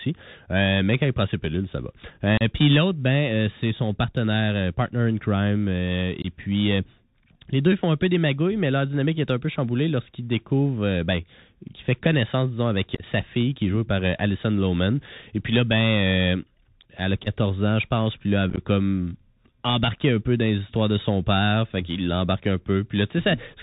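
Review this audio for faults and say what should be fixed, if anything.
The speech has the Bluetooth CVSD headset codec all the way through: nothing above 4 kHz, scratchy s sounds and granular hiss from the one-bit adaptive-step coding, which fits a 64 kbps link. Switching the headset to wideband mSBC, or recording on a wired mic, would fix it.

There's also unconcealed Bluetooth headset packet loss, with abrupt holes at 2.37–2.42 s, 6.22–6.26 s, 12.95–13.04 s, 17.24–17.28 s and 18.50–18.59 s. The later three are scattered dropouts rather than single gaps. Keeping the headset close to the phone, away from Wi-Fi interference, would help.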